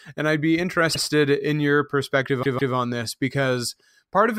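Speech with two audible stutters: from 0.93 to 1.01 s a 78 ms fragment plays twice in a row, and from 2.42 to 2.73 s a 157 ms fragment plays three times. This is repeated frames: runs of compressed frames were delivered more than once, so the decoder replayed them. The block lengths point to about three and six codec frames, and together the repeats add roughly 0.39 s to the audio.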